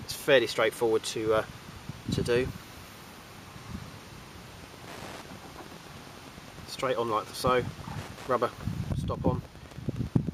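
From 4.62 s to 10.27 s, a nearby Wi-Fi radio couples into the audio circuit, which rectifies its transmissions and causes Wi-Fi interference. The beacon repeats every 102.4 ms and is heard as steady ticking nearly ten times a second, roughly 20 dB below the sound.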